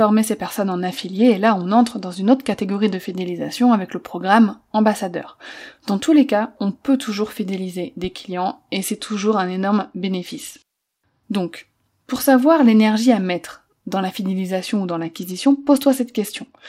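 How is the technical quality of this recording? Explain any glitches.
The speech has three stretches of degraded quality, all from the same cause. Between 0.57 and 3.22 s (ending just before "avec le programme ambassadeur"), 8.75 and 11.23 s, and 14.61 s to the end (starting after "à mettre dans la"), the treble dulls and gritty noise appears. This is a Bluetooth SBC bit pool drop. A congested wireless link forced the encoder to spend fewer bits, consistent with a fall from bit pool 31 to 13, around 94 kbps. Upper sub-bands were starved and the rest coarsely quantised.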